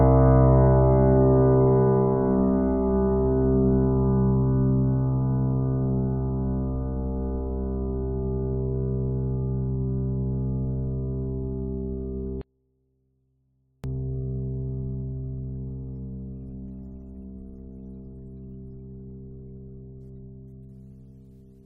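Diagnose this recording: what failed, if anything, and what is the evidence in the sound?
An audio dropout to a faint residue breaks the music from 12.41 s to 13.84 s, a gap of about 1.4 s. The music cuts out abruptly and returns just as suddenly, and the gap is not silent: a faint trace of the signal continues roughly 40 dB below its normal level. The likely cause is a momentary break in the analogue wiring, such as a loose connector, where the downstream path stayed live and only leakage got through. Digital zero-fill would leave true silence, and a musical pause or fade would not start and stop this sharply.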